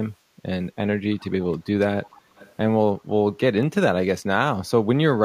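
From 1.15 to 1.25 s, a faint copy of the speech arrives about a third of a second late. The delay is a steady 321 ms. This is echo leak, most likely from a loudspeaker at the far end whose echo canceller let part of the microphone pickup back into the call. Room reverberation would give a smooth tail that fades out behind each sound. Here there is instead a distinct repeat, about 30 dB down.

At 1.54 s there is a single sharp click. This is dropped samples, most likely a tiny fraction of a millisecond missing from the stream, so the waveform jumps straight to a later value. No audible sound goes missing, which tells it apart from a packet-loss gap or a stutter.

The echo returns from 2.14 to 2.19 s and again from 2.36 to 2.52 s, at the same 321 ms lag. The later scrap is a little louder, about 25 dB below the speech.

A second identical click falls at 3.63 s.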